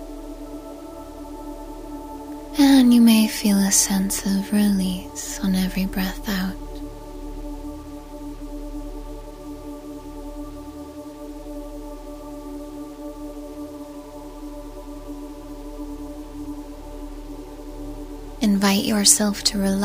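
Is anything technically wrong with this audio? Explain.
Yes. Throughout, the audio shows low bit depth without dither, likely 8-bit rounding, so the error tracks the signal, leaving gritty, grainy distortion about 30 dB below it that worsens on quiet passages.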